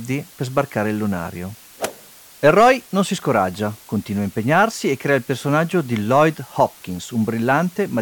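A constant, even hiss sits under the speech for the whole clip, with no crunch or grit on the voice itself. This is low bit depth with dither: the audio is held at 7 bits, and dither turns the rounding error into steady white noise roughly 25 dB below the signal.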